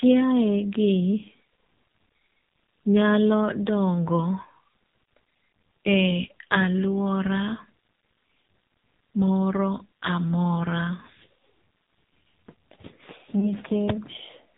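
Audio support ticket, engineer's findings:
AMR narrowband mobile codec, whole clip: speech squeezed through a low-rate vocal-tract model, band cut at 4 kHz, heavy damage. Voice buzzy, thin and synthetic, consistent with a very low AMR-NB mode around 5.9 kbps.

Lost AMR speech frames, 13.40 to 13.46 s: frame failed its check, decoder repeated the last pitch and tract settings at reduced gain. Short dip or warble, speech briefly weak or rough on return, pointing to a single lost 20 ms frame.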